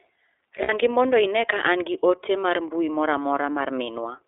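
Throughout, the speech passes through the iLBC codec, which fits its 13.33 kbps, 30 ms frame mode. The band is limited to about 300 Hz to 3.6 kHz, so a spectrogram shows nothing above roughly 3.6 kHz. The damage is plainly audible as a rough, synthetic edge.

From 0.62 to 0.7 s, lost iLBC frames, consistent with two missing 30 ms frames, are concealed by a repeated pitch cycle with added noise. This sounds like a held, buzzy vowel and appears as flat, smeared harmonics on a spectrogram.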